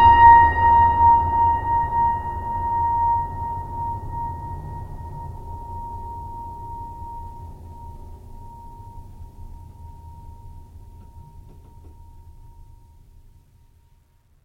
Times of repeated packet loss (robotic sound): none

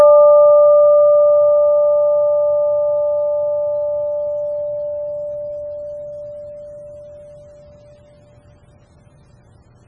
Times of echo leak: none

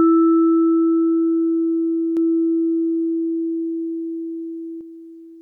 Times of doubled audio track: 2.17-4.81

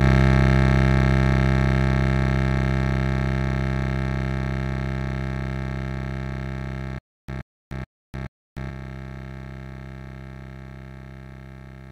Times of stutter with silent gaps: 6.99-8.70

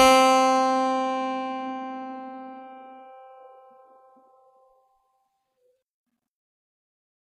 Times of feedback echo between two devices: none

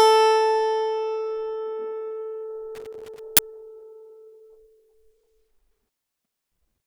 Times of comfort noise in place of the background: none

